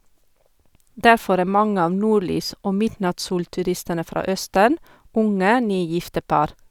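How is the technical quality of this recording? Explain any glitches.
Nothing in this speech recording jumps out as a glitch, so there's really nothing to explain here.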